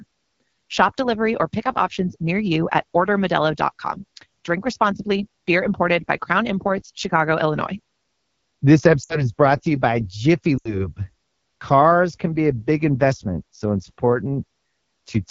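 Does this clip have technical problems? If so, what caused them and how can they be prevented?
Yes. Throughout the clip the speech sounds rough and raspy, with a buzzy, grainy edge and a thin, hissy top end. This is the AMR wideband (HD Voice) codec running at 8.85 kbit/s, one of its two lowest rates. The codec models speech below 6.4 kHz with a vocal tract filter driven by pulses and fills 6.4 to 7 kHz with shaped noise. At this bitrate it has too few bits to place those pulses accurately, so the excitation comes out coarse. Running the call at 12.65 kbit/s or higher would prevent this, because speech is clear at those rates.

The speech also drops out twice, from 9.03 to 9.31 s and from 10.57 to 10.87 s. Each time the sound falls to near silence within two frames, then returns weak and rough for a moment. These are lost AMR speech frames. Radio errors made frames fail their checksum, so the decoder repeated the last good pitch and vocal tract settings with falling gain and then recovered. 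The gaps were about 60 ms and 80 ms, which fits three and four 20 ms frames. Better radio coverage, or a more robust lower-rate codec mode when the signal is weak, would prevent these dropouts.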